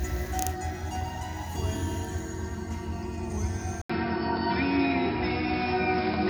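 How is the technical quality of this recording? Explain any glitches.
The first part is clean, but at 3.82 s the sound goes dull after an 80 ms gap. It stays capped at 5.3 kHz, shifts level by a few dB and picks up a new, faint noise floor. That's likely an input switched to a poorer device.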